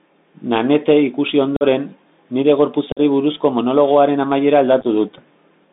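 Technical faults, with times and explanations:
Throughout, Bluetooth CVSD headset codec: speech confined to about 200 Hz–3.7 kHz, plainly scratchy and hissy; spectrogram shows nothing above 4 kHz and a granular noise floor.
1.56–1.63 s, 2.92–3.00 s, 4.81–4.85 s, unconcealed Bluetooth headset packet loss: lost headset packets leave abrupt holes, about 45 ms each at first, the last scattered short gaps; waveform shows flat-cut dropouts.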